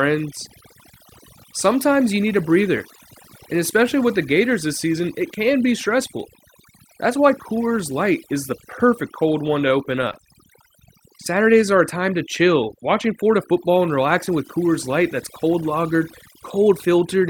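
Overdone noise removal runs through the whole recording. A noise reducer set far too aggressively has pushed frequency bands near its noise estimate almost to nothing, taking the quieter parts of the speech along. The background becomes near silence dotted with twinkling specks.

Scattered short gaps appear from 9.23 to 10.16 s, just after "is the perfect". Around seven tiny dropouts, none longer than roughly 15 ms, were patched by extending the preceding sound, leaving brief ticks and small smears across that second.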